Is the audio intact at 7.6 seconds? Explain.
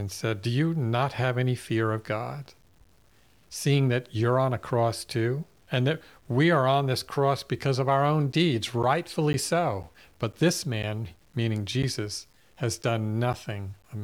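No. At 7.6 seconds, as throughout the clip, the speech carries low bit depth without dither. It is likely truncated to about 9 bits. The error tracks the signal, so quiet passages turn grainy and gritty, roughly 40 dB below the speech.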